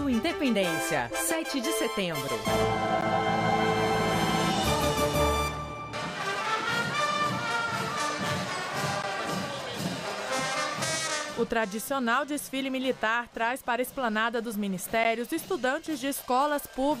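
At 3.01 s, 9.02 s and 15.04 s the sound stops for about 13 ms with hard edges on both sides. This is a gap between chunks: the audio was delivered in 6-second pieces and a sliver of silence was inserted at each join. Unlike a dropout, nothing is missing. The material resumes exactly where it left off, only delayed, and the holes fall at a strict 6-second spacing rather than at random.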